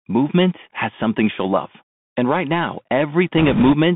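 Throughout, the speech carries the Bluetooth CVSD headset codec: band-limited to about 150 Hz–3.6 kHz, with scratchy sibilants and granular hiss, consistent with a 64 kbps one-bit delta stream. From 3.38 to 3.73 s, bit errors on the Bluetooth voice link, at a rate of a few percent, add a rushing, crackly noise over the speech, without sharp clicks.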